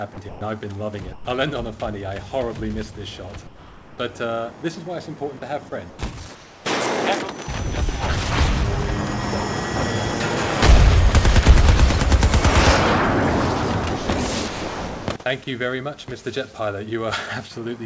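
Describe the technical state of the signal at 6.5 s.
Comfort noise in place of the background spans 6.35–6.65 s: steady, featureless noise about 3 dB quieter, likely generated by the receiver while the sender paused transmission.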